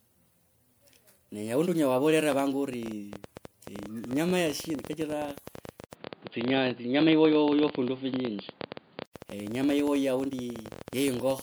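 A speech recording that has most likely been decoded and re-encoded as MP3 at 128 kbit/s around five times, so fresh quantisation on shifting frame grids has piled up. The generation loss sounds swirly, smeared and hollow throughout, beyond what that bitrate alone would cause, with consonant attacks blurred. From 2.73 s to 11.40 s, a train of clicks, likely interference from nearby equipment or a faulty connection or power supply, injects pulses about 14.8 times per second at an irregular pace, roughly 150 in all. They are heard as ticking and popping over the speech and in pauses, peaking about 5 dB above it. At 5.85 s the input switched to a poorer device, likely another microphone or a headset call profile. There is an 80 ms silence at the switch, then nothing above 4.8 kHz, a level change of about 5 dB and new background noise about 35 dB down, making the sound dull and boxy until it clears at 9.14 s.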